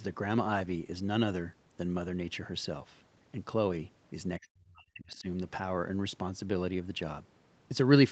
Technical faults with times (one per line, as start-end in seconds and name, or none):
4.39-5.27 speech suppressed in double talk